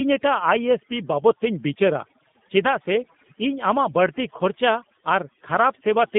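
Overdone noise removal, throughout: the denoiser pushes bands near its noise estimate almost to silence, leaving twinkling specks in pauses. G.729 codec, throughout: the speech is rebuilt from a vocal tract filter and a pitch predictor, which fits an 8 kbit/s G.729A line. It passes roughly 150 Hz to 3.6 kHz, nothing above 3.7 kHz, and sounds plainly rough and synthetic.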